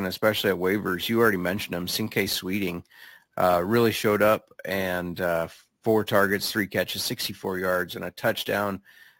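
Imaging from sample-and-hold upsampling runs throughout the speech. The audio was raised from 16 kHz to 44.1 kHz by repeating samples without smoothing, so a mirrored copy fills 8 to 16 kHz at about 18 dB below the signal, heard as a metallic fizz tracking the speech.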